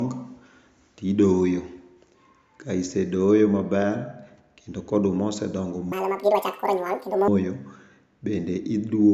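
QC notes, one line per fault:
5.92–7.28 s, wrong sample rate: this stretch runs at exactly double speed and jumps a full octave (12 semitones) higher, so the speech sounds squeaky and rushed before dropping back to normal. The samples are played out at twice the rate they were captured at without any resampling, which fits 16 kHz material being clocked at 32 kHz. Because nothing converts the rate, timing and pitch scale together by that same factor of two.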